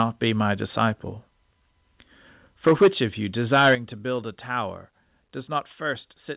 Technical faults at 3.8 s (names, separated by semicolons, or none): microphone overload; microphone volume stepped down